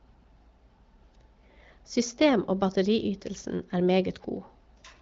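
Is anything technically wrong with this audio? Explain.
No, nothing is technically wrong with this audio.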